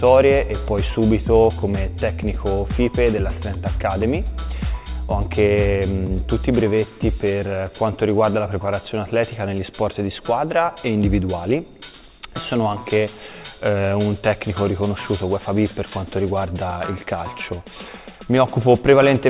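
No technical faults can be heard in this audio.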